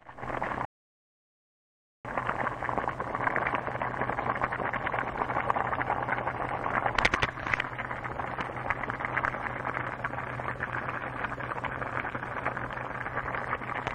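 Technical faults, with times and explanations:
0.65 to 2.05 s, rebuffering stall: the player runs out of downloaded audio, falls silent for about 1.4 s, then picks up exactly where it halted. Unlike a dropout, nothing is skipped; the stall only inserts time, delaying everything after it.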